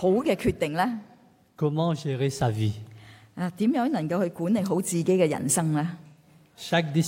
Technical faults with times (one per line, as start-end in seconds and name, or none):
6.07-6.27 AAC frame loss with concealment